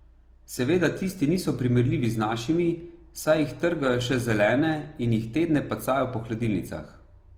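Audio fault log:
Throughout, Opus compression. The speech sounds rough and grainy, with a noisy fizz where clean detail should be. The damage is plainly audible. Bandwidth stays wide, with content up to 20.2 kHz, so nothing sounds muffled. The cause is likely Opus in its music (CELT) mode at a low rate, which fits about 24 kbps. Short of bits, the encoder keeps each band's energy but refills fine detail with folded copies of lower bands or noise. That substitution is the grit.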